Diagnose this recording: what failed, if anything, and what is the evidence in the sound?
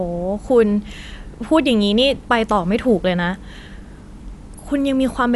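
Dolby Digital compression throughout, at the codec stage, likely: the speech is dull, with nothing above about 11.4 kHz and a rough, fluttering noise around tonal parts, which fits a 64 kbps encode. The starved encoder narrowed the band and left many frequency lines to dither-noise fill.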